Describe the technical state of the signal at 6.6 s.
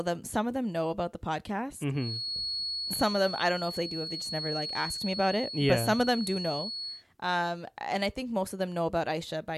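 At 6.6 s there's a feedback whistle running under the speech, from 1.92 s to 7.05 s: a thin, steady tone at 4.4 kHz, swelling and fading slowly, a few dB below the voice. It's likely a speaker-to-mic loop sitting right at the edge of feedback.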